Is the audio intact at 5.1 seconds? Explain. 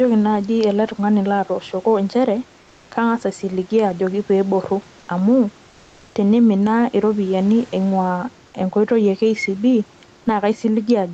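No, not quite. Just before 5.1 s, from 4.99 to 5.07 s, there is comfort noise in place of the background. For those 80 ms the real room background, already about 32 dB below the loud parts, gives way to a smooth, featureless hiss about 2 dB quieter. The likely cause is the sender's discontinuous transmission in Opus stopping during the pause, leaving the receiver to synthesise noise. On a spectrogram the patch looks uniform and grainless, with no texture, before the detailed background resumes.

Gain pumping also runs through this moment. An overdriven input with a fast limiter likely ducks the level on each loud sound and lets it recover in the gaps, a swing of around 5 dB. The waveform envelope of the noise floor rises and falls against the speech peaks, and the spectrogram shows the background band brightening between utterances, all below the 8 kHz ceiling of the call path.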